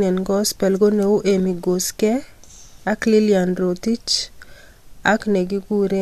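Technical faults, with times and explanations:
No technical faults are audible.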